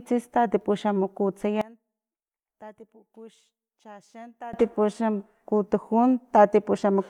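From 1.61 to 4.53 s the speech collapses by about 24 dB and turns faint, then returns at full level. The likely cause is one channel inverted: with one stereo side's polarity reversed, the centred voice cancels when the channels are summed to mono, leaving only their small difference. Unlike a plain gain drop or dropout, the sound doesn't simply get quieter or go silent. What remains is only a faint residue of the speech.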